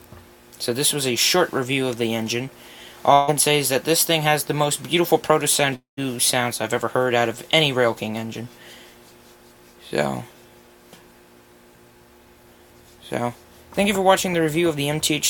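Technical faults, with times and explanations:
3.13–3.30 s, burst of packet loss: consecutive packets failed to arrive, so the last sound is extended and faded for 142 ms, then playback jumps ahead, skipping 140 ms.
5.76–5.99 s, long network dropout: the likely cause is a stall in arriving audio. The last sound is held and fades into 130 ms of silence, and 220 ms is lost.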